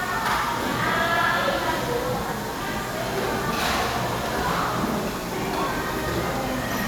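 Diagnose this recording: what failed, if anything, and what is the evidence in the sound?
Sharp clicks at 1.17, 2.56, 3.74 and 5.43 s, likely dropped samples in the driver buffer; under a millisecond lost, so no gap, unlike a dropout.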